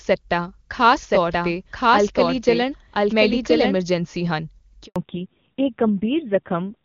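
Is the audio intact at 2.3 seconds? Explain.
No, at 2.3 s you're hearing a doubled audio track, running from 1.03 to 3.77 s. A second full-band copy trails about a second behind at roughly the same level, dry and with no room colour, likely from a slower capture path recording the sound twice.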